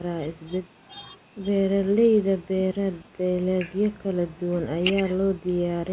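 No technical faults are audible in this speech.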